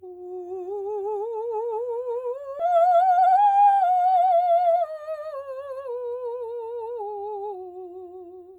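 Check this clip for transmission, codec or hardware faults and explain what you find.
Two transmission faults are audible in this music.

At 2.59 to 2.61 s there is a skip ahead. About a second of audio was discarded, and playback splices straight onward. On a waveform this shows as an abrupt seam with no gap.

From 2.64 to 5.25 s there is a jitter buffer speed-up. The buffer trimmed short pitch-period slices to shed roughly 0.4 s of excess delay, so the music runs at 114% tempo with unchanged pitch. A spectrogram shows compressed note spacing and repeated small discontinuities.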